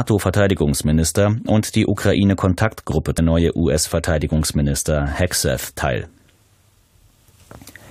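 At 3.17 s the sound jumps abruptly forward with a brief blip, and the material before and after the jump doesn't join up. This is most likely a stream segment skipped: one chunk of the segmented stream failed to load, so the player moved on to the next one. Unlike a dropout, there is no silent gap to wait through. The audio continues without pause, and the missing stretch shows only as a discontinuity in what is heard.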